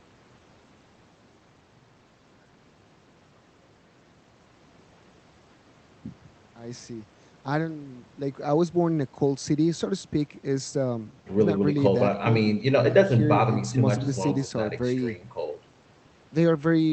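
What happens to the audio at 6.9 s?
Nothing goes wrong at 6.9 s: the speech passes through intact there, with only the steady coding character of the Opus call path and its high end limited to about 8 kHz.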